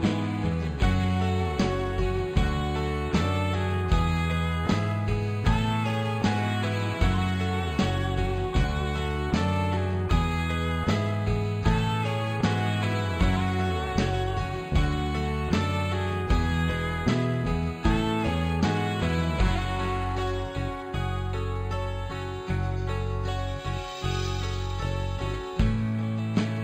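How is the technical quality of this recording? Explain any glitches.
The recording has one fault, present for its whole length: imaging from linear upsampling.

Throughout the clip, the top of the band is dulled and a weaker mirrored copy of the spectrum sits above it. The pattern points to material raised from about 11 kHz to 48 kHz by straight-line interpolation between samples. That interpolation filters poorly, so it rolls off real content near 5.5 kHz and lets a reflected image through, roughly 30 dB below the signal. The image is heard as a metallic edge on bright, high-frequency sounds. On a spectrogram, the energy thins out approaching 5.5 kHz, and a faint flipped copy of the lower spectrum appears between 5.5 kHz and 11 kHz.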